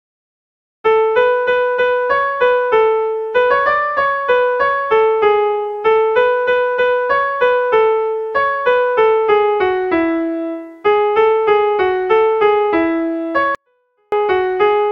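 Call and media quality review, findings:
24-bit alignment error (too quiet), 13.55–14.12 s. Samples packed into the low 24 bits of 32-bit words, then read as full 32-bit integers, so every value is scaled far down. Audio stays clean but drops about 48 dB at once for 0.57 s and is nearly inaudible.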